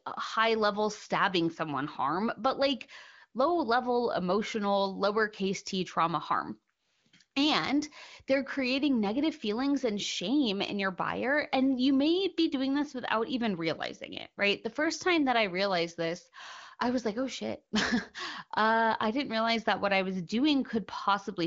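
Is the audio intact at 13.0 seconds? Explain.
Yes, the audio is intact at 13.0 seconds, with no fault at that moment.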